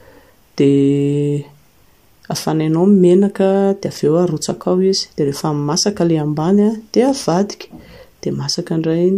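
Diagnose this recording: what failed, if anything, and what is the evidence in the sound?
Nothing has failed; no fault can be heard anywhere.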